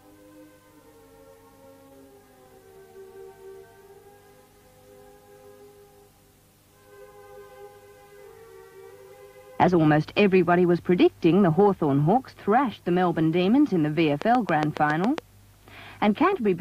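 A train of clicks runs from 14.22 to 15.19 s: about seven near-identical pulses at a regular 7.2 per second, peaking roughly 15 dB above the sound, heard as steady ticking, likely from electrical interference or a faulty connection or power supply injecting repeated spikes.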